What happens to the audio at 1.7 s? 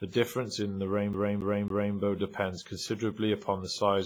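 At 1.7 s the disc player is caught on a scratch, a CD stuck on one turn. From 1.13 s to 1.96 s, right after "difference in the", the laser jumps back one track each revolution, so the same 0.27 s slice of speech plays three times over with a brief mute at every jump. The result is the quick, evenly spaced stutter of a skipping CD rather than forward progress.

Underneath that loop, and across the whole clip, is heavy WMA compression, likely from encoding at a low bitrate around 24 kbps. The transform coder spreads its quantisation noise over long blocks and drops weak spectral detail. At 1.7 s the repeated speech sounds ringing and washy, with a hiss that swells and fades along with the signal.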